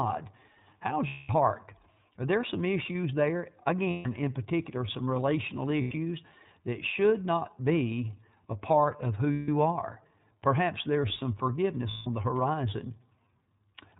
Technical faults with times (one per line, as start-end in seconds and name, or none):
0.00-13.99 iLBC codec
1.07-1.30 lost iLBC frames
3.90-4.08 lost iLBC frames
5.82-5.94 lost iLBC frames
9.33-9.49 lost iLBC frames
11.91-12.07 lost iLBC frames